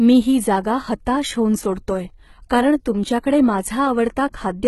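Speech, heavily damaged by what is likely HE-AAC compression for the whole clip. The treble is rebuilt from lower bands, so s sounds turn gritty and metallic, which fits a very low bitrate around 16 kbps. On a spectrogram, copied-looking upper bands end abruptly at about 11.8 kHz.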